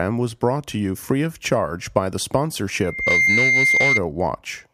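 From 2.83 s to 4.02 s a loudspeaker feedback squeal rises over the speech: the microphone is hearing its own loudspeaker, and at 2.1 kHz the loop gain tops unity, so that single frequency regenerates. It swells over roughly a third of a second to a piercing whistle a few decibels louder than the speech. A spectrogram shows a bright, unwavering horizontal line at 2.1 kHz, and the waveform's envelope balloons into a dense, steady block.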